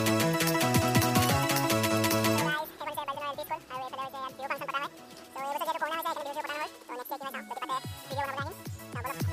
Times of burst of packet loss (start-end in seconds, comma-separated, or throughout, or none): none